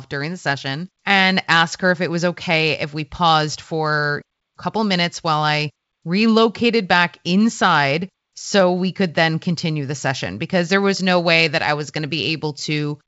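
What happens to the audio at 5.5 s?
Nothing goes wrong at 5.5 s: the speech there passes through intact, carried by G.722 wideband telephone coding at 64 kbit/s, which leaves it clear up to about 7 kHz with at most a faint upper-band hiss.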